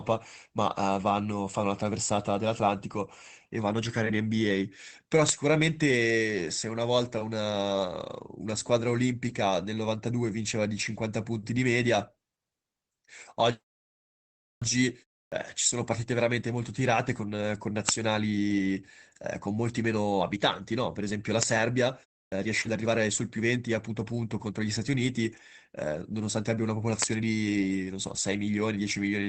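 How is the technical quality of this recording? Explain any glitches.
The recording carries three distinct kinds of glitch, all from 14.58 s onward, on top of a call-codec sound whose top end stops near 8 kHz.

Clipped start after a pause: at 14.58 s, 15.28 s and 22.28 s, speech resumes with its onset missing, roughly 37 to 39 ms each, after pauses of about 1.0, 0.32 and 0.31 s. The output stage needed time to wake, so the opening sounds are swallowed. These cut into the words themselves.

Short concealed packet loss: from 22.61 to 22.67 s, about 40 ms of audio never arrived, and the decoder bridged the gap by extending the preceding sound before blending back. It comes across as a brief smear or wobble mid-speech, not a missing onset after silence.

Lost packet rebuilt from error correction: overlapping at 22.65 to 22.71 s, about 40 ms was reconstructed from the low-bitrate backup copies carried in later packets, which points to two lost packets. 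There is no gap here. Instead the sound turns briefly rougher and noisier, which separates it from the smeared extrapolation just before.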